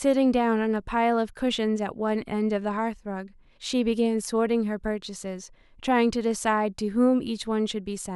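No technical faults are audible.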